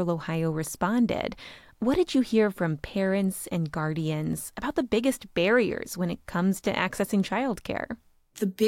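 Nothing is technically wrong with this audio.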